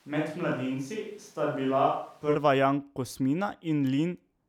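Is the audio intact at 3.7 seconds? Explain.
Yes, at 3.7 seconds the speech is intact, with no dropout, click, glitch or other disturbance at that moment.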